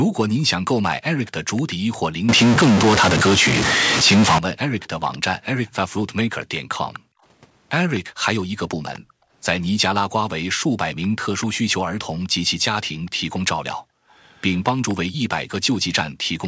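Echo leak, 0.94 to 1.97 s: a faint delayed copy of the speech trails the talker by 249 ms, sitting roughly 25 dB below it. This points to a far end playing the call on a loudspeaker, where the echo canceller likely let part of its microphone pickup through and sent it back, so the returned speech arrives a quarter of a second late.

Background gated by the echo canceller, 1.76 to 1.87 s: for around a tenth of a second, the room sound under the speech sinks by up to about 40 dB and then comes back. While the loudspeaker was active, the canceller clamped the microphone down hard, briefly removing the ambient bed, and released it as soon as playback eased.

Stuck bit, 2.29 to 4.38 s: a distortion rides on the waveform, and the gaps between phrases fill with noise instead of falling quiet. One data bit is likely held at a fixed value by a faulty line or converter, shifting about half the samples and flipping small values near zero.

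Echo leak returns from 4.81 to 9.0 s and from 11.02 s to the end, again delayed 249 ms but louder, roughly 20 dB under the speech.

Background gated by the echo canceller, 7.0 to 9.31 s and 13.81 to 16.26 s: the room sound dips by up to about 40 dB. The first stretch has under a second of dropout in total, and the second has around half a second.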